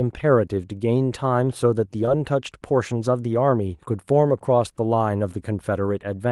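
A speech recording carried over a WebRTC-style call path, with content rolled off above roughly 12 kHz, which fits an Opus stream at around 32 kbps. Short concealed packet loss occurs from 2.05 to 2.09 s: about 20 ms of audio failed to arrive, and the decoder extrapolated from the preceding signal before crossfading back, leaving a brief smeared wobble where the real sound should be.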